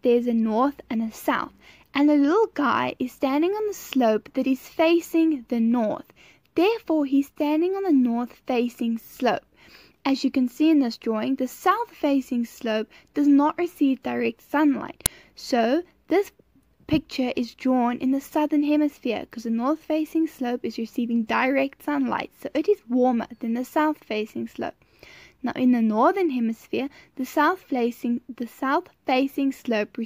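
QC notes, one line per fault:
15.06 s, uninitialised buffer: a short, loud burst of harsh digital noise, about 12 ms long, cuts abruptly into the sound. One playback block went out before any audio had been written into it, so whatever values were left in that memory were played as samples. Those stale values have no relation to the signal, so they land as raw noise. The length fits a single 512-sample buffer.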